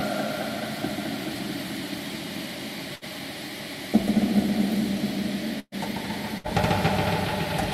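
Bursts of packet loss hit at 2.95–3.04 s, 5.59–5.75 s and 6.38–6.47 s. The receiver stretches and fades the last sound, then skips ahead. The middle gap drops to silence briefly.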